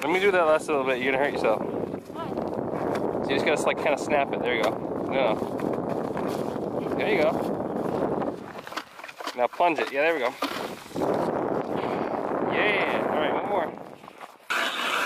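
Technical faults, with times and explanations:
Nothing here needs flagging, since no technical faults turn up anywhere in the clip.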